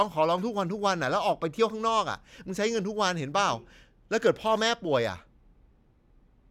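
No audible faults turn up anywhere in this speech recording.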